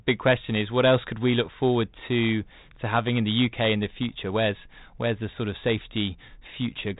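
Nothing here counts as a fault: the speech comes through a G.726 ADPCM link at 32 kbit/s, with the top end stopping around 3.8 kHz as you'd expect for a telephone path, and only the light graininess that codec normally leaves behind.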